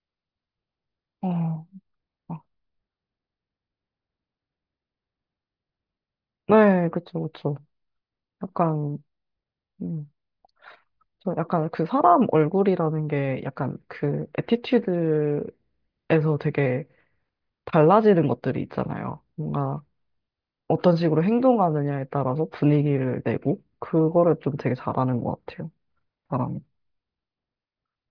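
No technical faults can be heard anywhere in the recording; the signal stays intact and continuous throughout.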